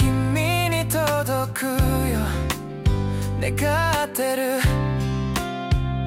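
No technical fault can be heard anywhere in this audio. Nothing in the sound points to a problem in the signal chain that would need tracing.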